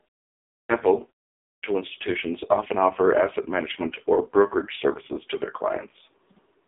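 A short speech recording with two kinds of fault. Throughout, it carries heavy AMR narrowband mobile codec damage: nothing passes above 3.7 kHz, and the buzzy, synthetic texture fits AMR-NB's lowest 4.75 kbps mode. There are also two clipped starts after a pause. From 0.40 to 0.69 s, after a 0.4 s silence, about 293 ms is swallowed. From 1.34 to 1.63 s, after 0.3 s of silence and just before "institutions often offer asset", about 287 ms is lost. In both cases the output device was likely still waking or relocking when sound resumed.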